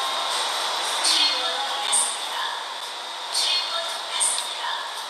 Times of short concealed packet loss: none

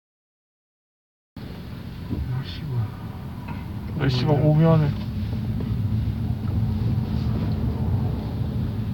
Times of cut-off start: 0.00-1.37

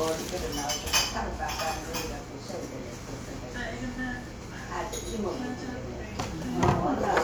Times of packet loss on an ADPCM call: none

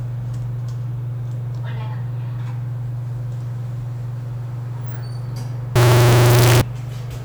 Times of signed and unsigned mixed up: 5.76-6.61

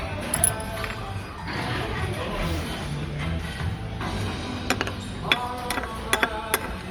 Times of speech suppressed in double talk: none

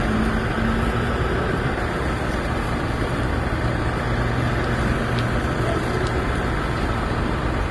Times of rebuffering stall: none

